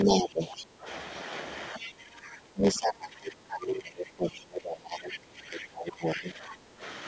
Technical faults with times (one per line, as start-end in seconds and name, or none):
0.00-7.07 block size mismatch (padded)
0.04-0.87 speech suppressed in double talk
0.57-0.64 other side's voice leaking through
1.72-6.83 speech suppressed in double talk
1.82-1.90 other side's voice leaking through
5.12-5.17 other side's voice leaking through